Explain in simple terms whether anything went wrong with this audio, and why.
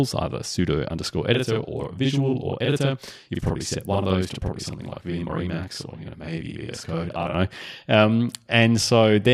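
From about 1.35 s to 7.35 s the speech doubles: a channel delay (doubling). One channel runs about 43 ms late, which fits a 2048-sample buffer. When both channels are combined, that late copy arrives at equal loudness as a distinct slap echo.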